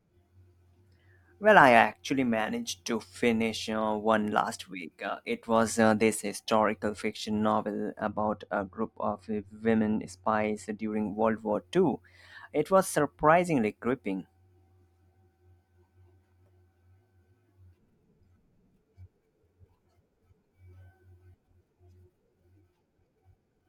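De-emphasis applied wrongly runs from 8.08 to 10.92 s of this speech. A treble cut intended to reverse pre-emphasis has been applied where no matching boost existed, so the response tilts smoothly downward with frequency, sitting about 10 dB lower at 10 kHz than at 1 kHz. Through that stretch the speech turns dull and muffled, its sibilants and crisp consonant edges softened, before the brighter balance returns after 10.92 s.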